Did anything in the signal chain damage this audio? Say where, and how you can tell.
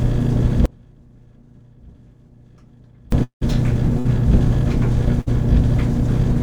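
Yes. An audio dropout to a faint residue runs from 0.66 s to 3.12 s, about 2.5 s in all. The sound cuts away abruptly rather than fading. What remains in the gap is only a faint trace of the signal, about 30 dB below its normal level, and then it snaps back just as suddenly. That points to the analogue wiring stage, likely an intermittent connection or contact. The wanted signal stopped reaching the input while the path after the break stayed live and picked up a weak leak.

A long network dropout follows from 3.23 s to 3.43 s. Roughly 180 ms of audio never arrives. The receiver stretches the last sound into a fading tail, and the final 110 ms or so collapses to silence. The audio then resumes further along, with that stretch simply gone. The mechanism is likely a stall in packet delivery that outlasted the receiver's concealment, so it ran out of material to extend.

Bursts of packet loss occur at 3.99 to 4.07 s and 5.21 to 5.28 s, each about 60 ms missing. 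In both, the receiver carries the preceding sound forward for about 55 ms as a short held, decaying smear before the stream picks up again past the hole. This is also the network stage. A few consecutive packets were dropped or arrived too late, and concealment papered over the gap.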